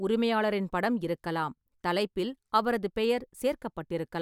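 No technical faults are audible anywhere in this speech.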